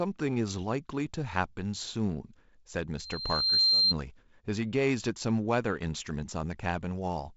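At 2.98 s a loudspeaker feedback squeal starts. The microphone picks up its own loudspeaker, and near 4.2 kHz the loop gain exceeds one. That tone swells for about 0.7 s to roughly 10 dB above the speech. It ends at 3.94 s.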